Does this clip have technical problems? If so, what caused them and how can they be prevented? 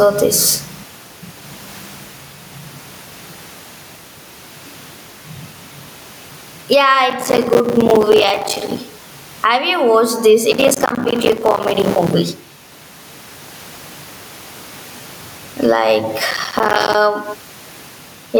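Yes. Gain pumping runs through the whole clip: the background swells in every pause and ducks by roughly 15 dB under each loud syllable, squashing the level range. Unlike a steady noise floor, which sits quietly about 41 dB below the speech, the rise and fall follows the speech. The likely cause is input gain set far too high, with a fast limiter clamping it. Lowering the microphone gain so the limiter rarely acts prevents this.

Processor overload crackle comes as gritty tearing bursts from 7.1 to 8.78 s, from 10.52 to 12.14 s (just after "you watched this"), and from 16.31 to 16.95 s. Each burst is a dense run of tiny silent gaps that fits missed buffers of around 5 ms. A single dropout would be one clean hole, while these bursts stop once the load passes. Larger buffers or less competing processor load prevent this.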